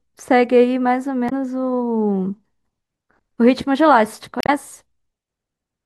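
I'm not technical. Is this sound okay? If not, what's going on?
No, there's damaged data in a compressed stream. Around 1.26 to 1.32 s and 4.41 to 4.49 s, corrupted file bytes make the player stumble, giving brief glitches in the speech.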